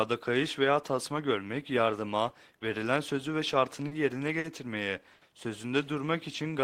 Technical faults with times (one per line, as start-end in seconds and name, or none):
3.87-3.92 short stall from a late packet
4.39-4.45 short stall from a late packet
5.14-5.22 short stall from a late packet
5.96-6.61 jitter buffer slow-down